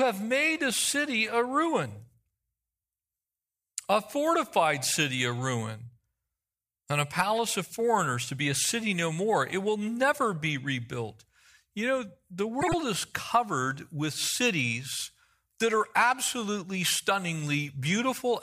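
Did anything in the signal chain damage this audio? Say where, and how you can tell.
Yes: frames out of order, at 12.61 to 12.74 s. This is damage at the network or packet stage. Two neighbouring runs of encoded frames were delivered swapped and decoded in that order, so this roughly 0.13 s stretch of speech plays with its halves exchanged. It is heard as a brief garbled flutter. No time goes missing, and the speech stays in step around the glitch.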